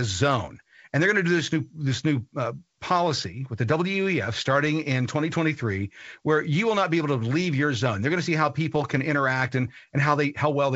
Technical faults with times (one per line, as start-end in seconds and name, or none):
none